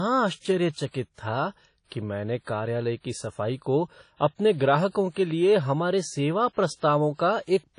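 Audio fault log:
throughout, WMA compression: the speech has a ringing, washy quality with a hiss that swells and fades along with the signal, and nothing comes through above about 10.1 kHz. That points to a likely low-bitrate transform codec, something around 32 kbps, where long blocks spread quantisation noise over tens of milliseconds and weak spectral detail gets zeroed out. The damage is plainly audible, so the top end sounds dull.
1.14 to 1.18 s, pre-echo: just before "था कि मैंने कार्यालय" there's a short burst of hiss, about 42 ms long, sitting ahead of a sharp onset. The transform coder spreads its noise evenly across the whole block, so the noise budget set by the loud attack also leaks into the quiet stretch before it. You hear that as a short hiss leading in, and the attack itself comes across softer than it should.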